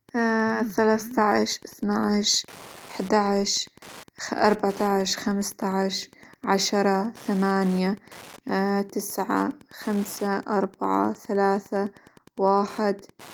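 Wi-Fi interference runs under the speech for the whole clip. A nearby Wi-Fi radio's beacon, repeating every 102.4 ms, is rectified by the audio circuit. It comes through as a steady tick, about ten per second. The ticking sits roughly 25 dB below the speech.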